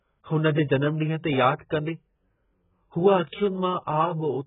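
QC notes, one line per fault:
Throughout: AAC compression, likely the cause of the heavy damage. The speech is dull and smeared, with nothing above 3.8 kHz and a warbling, fizzy texture on sibilants, which fits a very low bitrate around 8 kbps. A spectrogram shows a hard ceiling at 3.8 kHz.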